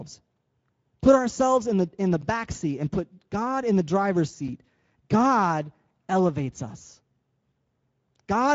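Speex codec damage runs through the whole speech clip. This CELP coder rebuilds speech from a compact filter model plus a coded excitation signal. When too few bits go to that excitation, voiced sounds lose their clean periodic structure and come out grainy and hoarse. The degradation here is plainly audible, which fits a middle setting of around 17 kbps. Nothing survives above 7.7 kHz, so the top of the band is missing.

A block of digital silence falls at 2.22 s and lasts about 10 ms. For that short stretch the output was simply silence, most likely because the program did not fill its output buffer in time. The signal drops out and returns with no fade, so each edge is an abrupt step. With a gap this brief it comes across as a tick or dip rather than as silence.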